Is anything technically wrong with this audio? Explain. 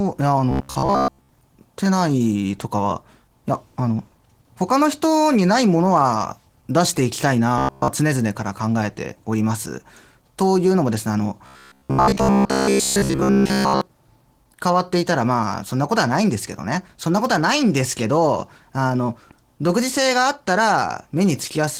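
Yes, there are two separate problems in this speech clip.

The whole clip carries Opus voice compression at 16 kbps in hybrid mode, with SILK handling the lower band and a CELT layer adding the top so the band stays fullband. At that rate the excitation is coded pretty coarsely in 20 ms frames, and it shows: the voice comes out a bit muffled and hoarse, with a faintly synthetic edge that's plainly audible throughout.

Then there's a robotic sound from repeated short buffers in three stretches: 0.51 to 1.29 s, 7.58 to 7.88 s, and 11.46 to 13.81 s. The likely cause is audio arriving too late and the player looping the last short chunk to fill the gap. The buzz sits at 66.8 Hz, which fits a chunk of about 15 ms. In the first stretch roughly 70% of the audio gets replaced, and in the other two nearly all of it, so the voice turns into a stiff metallic drone.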